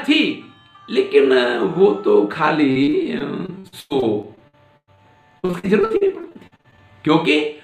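From 2.71 to 4.99 s, repeated packet loss chops up the sound. Lost or late packets leave holes of up to 103 ms. Each is patched by extending the last sound, so it turns robotic. Again at 5.39 to 6.80 s, with shorter gaps, up to 51 ms.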